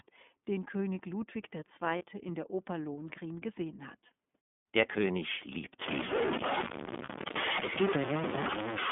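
Speech heard through the iLBC codec throughout. It is confined to roughly 200 Hz to 3.5 kHz and sounds rough and synthetic, which fits the 30 ms, 13.33 kbps mode. Lost iLBC frames occur at 1.98 to 2.04 s and 7.04 to 7.08 s. Each time, about 30 ms is bridged by a held, buzzy repeat of the last pitch cycle. The voice recovers at once. From 5.82 s to the end, the sound turns harsh and grainy. The grit follows the signal and is about as loud as it. The likely cause is low bit depth without dither, truncated to something like 3 bits.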